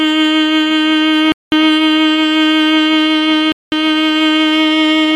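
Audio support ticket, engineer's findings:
Gap between chunks in the music. Silent holes at 1.32–1.52 s and 3.52–3.72 s, 200 ms each. Spacing fits 2 s chunks. Probable component: chunked transport or player. Silence inserted at each join, from padding or late chunk start. No content lost.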